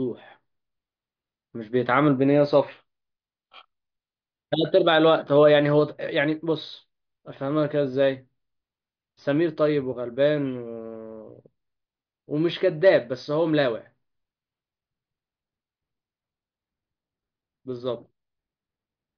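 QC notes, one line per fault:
Speech track checked by ear with nothing to log.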